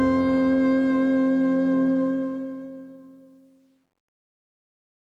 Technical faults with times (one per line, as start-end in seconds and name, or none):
2.03-5.07 truncation distortion on a fade